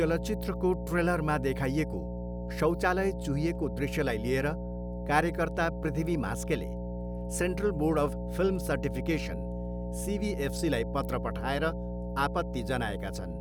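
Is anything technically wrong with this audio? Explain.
Yes. Mains hum runs through the entire speech clip: a steady 60 Hz tone, roughly 5 dB below the speech, from a ground loop or nearby transformer leaking the power line into the signal.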